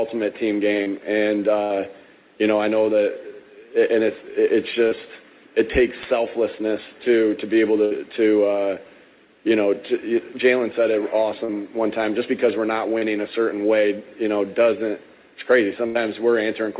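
A brief smear at 0.83 s is short concealed packet loss: about 30 ms of audio arrived too late or not at all, and the receiver bridged the hole by extending the preceding sound before blending back into the real signal. At 1.64 s a longer held, fading stretch marks a burst of packet loss, where about 60 ms in a row went missing. The concealment stretched the last sound while turning it down, and playback resumed further on with that span gone. The same short smears recur at 4.88 s, 11.45 s and 12.98 s. Further bursts occur at 7.85 s (about 60 ms) and 15.86 s (about 90 ms, the longest). Throughout, the call path's narrowband coding leaves nothing above 4 kHz, which fits G.711 mu-law at 64 kbps.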